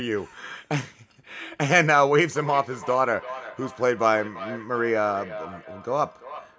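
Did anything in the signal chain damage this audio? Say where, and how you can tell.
Yes, a feedback echo between two devices starts at 2.36 s and runs to the end of the clip. It arises in the call stage: a second device in the room replays the far-end audio, this microphone recaptures it, and the echo canceller cannot remove sound it did not play itself. Each syllable returns at a steady interval of roughly 300 ms, up to about 15 dB below the speech, and sounds thinner and more ringing each time. On a spectrogram, every onset is trailed by fainter copies at that fixed spacing within the 8 kHz call band.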